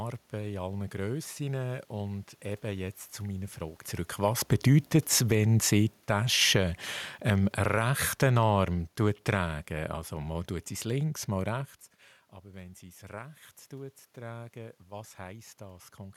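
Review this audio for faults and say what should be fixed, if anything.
The speech sinks gradually three times, with the room noise dropping along with it: about 7 dB from 4.09 to 6.25 s, about 5 dB from 7.14 to 8.44 s, and about 3 dB from 9.0 to 11.68 s. This is automatic gain falling, where the gain control judged the input too loud or its background noise too strong and eased its gain down. The level shifts near 3.5 and 11.5 s come from the talker moving relative to the microphone, not from the system. Setting a lower, steady input level, or restricting how far the automatic gain control may cut, would prevent these dips.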